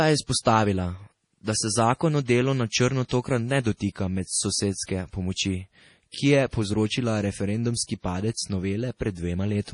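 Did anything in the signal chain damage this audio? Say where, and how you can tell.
Yes, at the codec stage, throughout the speech. Nothing is present above 10.6 kHz, a hard shelf where the encoder dropped the treble, and the damage is heavy: watery, swirling texture, metallic chirps on s sounds and smeared consonant attacks. This is likely MP3 compression starved of bits, which fits a bitrate around 32 kbps, with weak frequency lines switching on and off between frames. A plain low-pass filter would sound dull but clean, without that swirl.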